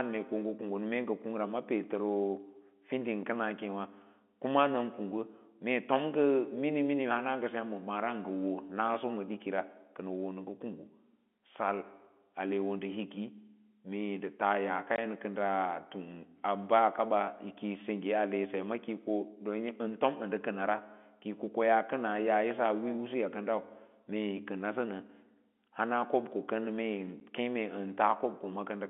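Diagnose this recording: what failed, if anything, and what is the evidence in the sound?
Packet loss filled with silence in the network: hard-edged gaps of 20 ms at 14.96–14.98 s and 10 ms at 27.2 s, which fits 10 ms packets dropped and replaced with silence.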